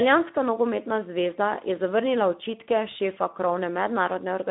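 Speech coded throughout with the Speex codec: plainly hoarse, noisy CELP grain within a 200 Hz to 3.6 kHz line band, empty above 3.7 kHz, fitting about 11 kbps, unlike clean band-limiting alone.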